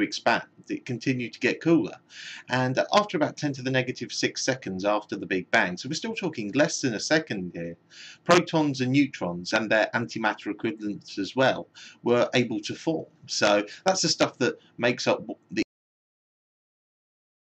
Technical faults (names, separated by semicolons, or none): cut-off end